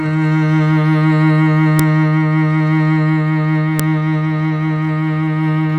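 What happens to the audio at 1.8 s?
At about 1.79 s there's a sharp, loud click in the music, a classic case of a file header played as audio. It sounds like separate WAV pieces, roughly 2 s each, were joined without stripping their headers, so a few dozen bytes of header data get read as sample values. That junk lands as a brief snap, lasting only a moment, and it cuts through regardless of what the music is doing right then.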